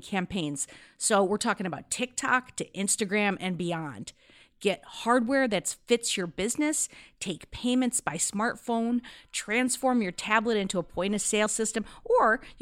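At 11.45 s, the decoder skips compressed frames: a short run of coded speech is either missing from the file or rejected as damaged, so it never reaches the output. Playback lurches forward by about 50 ms, a jump that fits two frames of 23.2 ms each, with a sliver of speech gone.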